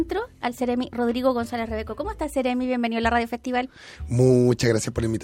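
From start to end, a faint buzz at 50 Hz rides on the sound. It is the resampler restarting on every block. Each 20 ms block was converted alone, likely from 44.1 kHz to 48 kHz. Every block edge leaves a small error. The buzz follows the signal and vanishes in silence.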